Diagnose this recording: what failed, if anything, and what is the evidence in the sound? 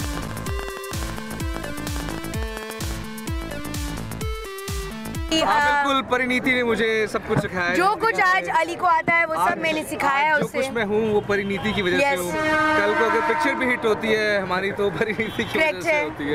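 Train of clicks, 0.04 to 2.92 s: about thirty loud, alike pulses at an uneven 9.1 per second, likely interference in the analogue wiring or interface.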